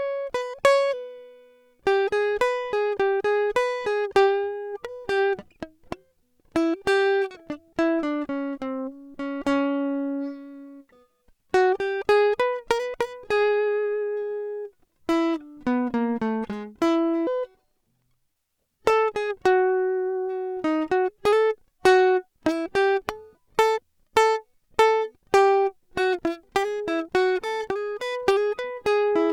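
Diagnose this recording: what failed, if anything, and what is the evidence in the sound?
From 17.27 to 18.36 s the music jumps up by roughly seven semitones and rushes along: a section at the wrong speed, running 1.52 times too fast. Pitch and tempo shift together, likely from playback or an edit clocking that passage at the wrong rate.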